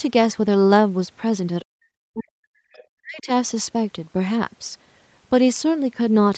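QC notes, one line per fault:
1.61–2.46 s and 2.92–3.29 s, speech suppressed in double talk: the speech sinks sharply, by roughly 40 dB at its deepest, over about 0.7 s of the first span and 0.4 s of the second. Likely the echo canceller turning down the near talker while the far side spoke.
2.74–2.84 s, other side's voice leaking through: a brief, faint scrap of a second voice, roughly 30 dB below the main speech. Likely far-end loudspeaker sound the echo canceller did not fully remove from the microphone.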